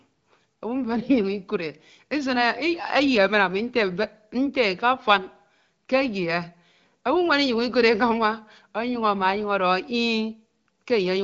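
Nothing goes wrong anywhere in this speech, which has simply come down an AMR wideband (HD Voice) link at 15.85 kbit/s, so what you hear is that codec's light coding texture and nothing at all above 7.5 kHz.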